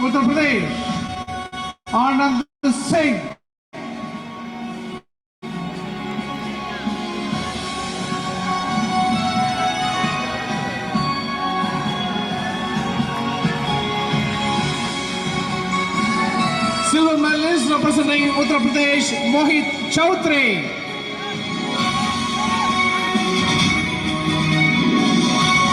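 From 1.07 to 4.95 s the audio shows repeated stalls (stutter): twelve short breaks where packets arrived late and the jitter buffer ran dry, each bridged by extending the last sound. Together they fill about 351 ms, roughly 9% of that span, with the longest single gap at 162 ms. Nothing is lost, but the sound drags and hiccups through this stretch.

During and just after this, three longer call audio freezes occur at 2.41 to 2.65 s (220 ms), 3.32 to 3.75 s (408 ms) and 4.97 to 5.44 s (448 ms). In each, the last sound is held briefly and then drops to silence for 160, 320 and 360 ms respectively before resuming where it left off. The likely cause is packets held up in transit, emptying the buffer, so each freeze inserts a gap and pushes playback later by its full length.

From 16.95 to 25.03 s a jitter buffer speed-up cuts back a buffer holding more audio than it aims for. The receiver trims short pitch-period segments repeatedly, removing about 70 ms in total, so playback runs at 101% speed with unchanged pitch. 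The effect is slight, with no obvious change in tone.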